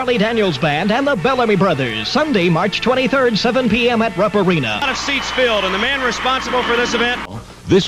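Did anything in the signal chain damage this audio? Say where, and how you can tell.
No, nothing in the signal chain damaged this audio.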